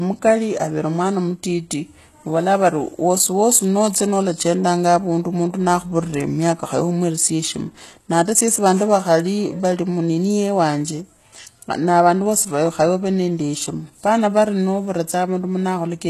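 From start to finish the speech has that telltale HE-AAC compression sound, with the damage plainly audible. The top end stays bright but it's been rebuilt, not carried through: the lower spectrum gets copied upward and roughly shaped, so the treble harmonics don't line up with what's below. S sounds come out gritty and a bit lispy, and nothing survives above 12.3 kHz. That's likely a low-rate HE-AAC encode, something around 16 kbps.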